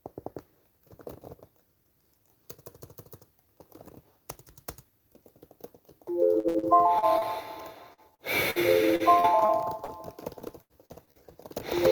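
From 6.39 to 7.24 s the sound turns choppy, with pieces dropping out. This is repeated packet loss (robotic sound): five gaps, the longest 66 ms, were each patched by extending the preceding sound, so about a quarter of the stretch is filler.

At 7.93 s and again at 8.15 s there are brief smears where a fragment of sound blurs or disappears. Both are short concealed packet loss: about 40 ms failed to arrive each time, and the receiver continued the last sound before blending back, stretching the first instance slightly.

At 8.51 s the sound briefly holds and fades, then resumes a little further on. This is a burst of packet loss: about 40 ms was lost, and the receiver covered it with roughly 51 ms of continued, decaying sound.

The robotic chop returns from 8.96 to 9.91 s and from 10.40 to 11.19 s, again as repeated packet loss (robotic sound). The first span has five gaps, up to 41 ms, with 160 ms missing and about a sixth of the span filled in. 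The second has six gaps, the longest 82 ms, also with 160 ms missing, and about a quarter of it is concealed.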